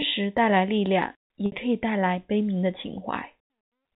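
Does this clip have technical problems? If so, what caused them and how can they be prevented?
Yes. Two gaps of packet loss with pitch repetition occur in this speech, at 1.46 to 1.52 s (60 ms) and 3.45 to 3.50 s (50 ms). At each gap, the receiver filled the missing audio by looping the last pitch period and fading it down, which produces a brief held, buzzy tone before the speech resumes. The short durations suggest a few consecutive packets dropped on the network, not a long outage. The G.711 telephone coding itself leaves only faint damage and limits the band to 4 kHz. To prevent the gaps, reduce network loss with QoS prioritisation or a larger jitter buffer, or add forward error correction or redundancy so lost packets can be rebuilt.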